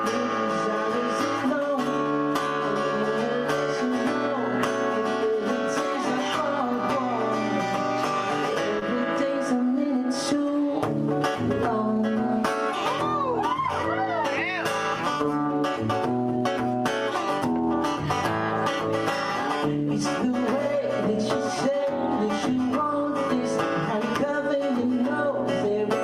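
The audio has one short concealed packet loss, from 8.79 to 8.83 s. About 20 ms of audio arrived too late for the decoder. The receiver covered the gap by extending the preceding sound, then faded back into the real signal. It comes through as a brief smear.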